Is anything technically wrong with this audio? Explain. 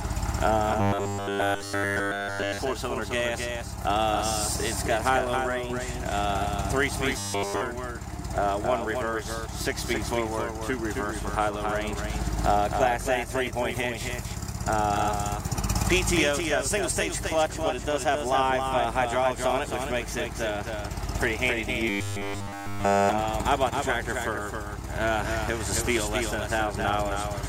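Yes. Throughout, a doubled audio track is heard: a full-band copy trails about 300 ms behind, about 5 dB quieter, likely from a second, slower capture path.

Robotic sound from repeated short buffers occurs at 0.81–2.60 s, 7.18–7.62 s and 21.89–23.09 s. Nearly all audio there is a repeated fragment, likely a 10 ms buffer, producing a rigid 100 Hz metallic buzz.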